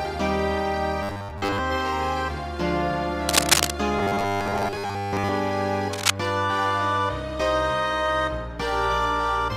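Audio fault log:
1.03–1.59 s and 3.99–5.29 s: robotic sound from repeated short buffers. The sound becomes a rigid, metallic buzz at 100 Hz. New audio likely arrived too seldom, so a short slice, fitting about 10 ms, was replayed to fill most of the gaps.
3.29–3.70 s and 5.93–6.13 s: cable scratch noise. Dense, uneven bursts of scratching sit over the sound, around 5 dB above it at first, then roughly level with it. A worn contact was likely moved, making its resistance jump rapidly.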